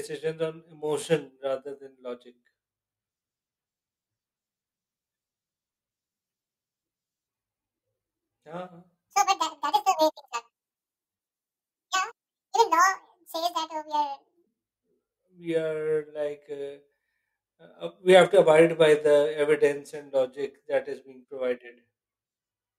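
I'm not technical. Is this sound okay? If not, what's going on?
No. From 9.09 to 14.47 s the speech suddenly turns high-pitched and rushed, like a chipmunk, then snaps back. That's a section at the wrong speed: it runs 1.86 times too fast, likely from being played against the wrong clock, raising the pitch by about ten semitones.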